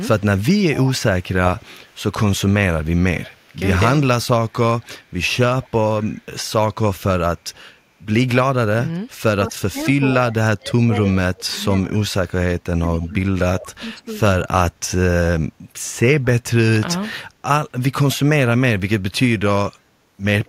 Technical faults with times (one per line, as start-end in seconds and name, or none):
0.20-1.96 echo leak
2.84-3.56 echo leak
4.51-4.88 echo leak
5.62-6.24 echo leak
9.50-14.16 speech suppressed in double talk